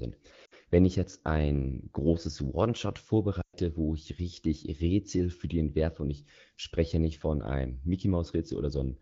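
Lost AMR speech frames occur twice. Corrupted frames were discarded, and the wideband decoder filled the gaps by repeating its last pitch and vocal tract settings at falling gain. At 0.45–0.54 s this drops the voice to near silence within two frames. At 3.41–3.57 s, just before "wo ich richtig", a longer 120 ms gap drops the sound to near silence within two frames before the speech returns.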